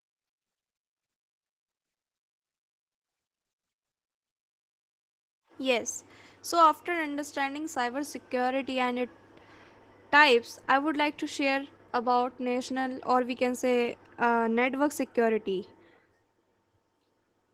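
Right from the start and through the whole clip, the speech carries Opus voice compression, and the damage is plainly audible. The top end is still there, but with so few bits to go around, the excitation is coded coarsely, so the voice comes out hoarse and slightly robotic. It sounds like hybrid mode, with SILK handling the lower band and a thin CELT layer above 8 kHz, at a rate that fits something around 16 kbps.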